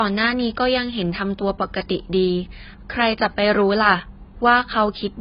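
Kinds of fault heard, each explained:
Low-bitrate audio saved at a high bitrate: The speech sounds muffled, with nothing above 5 kHz and the artefacts of the first encoding throughout. This likely comes from a very low-bitrate encoding, around 16 kbit/s, re-saved as a much larger MP3 that cannot restore what was lost.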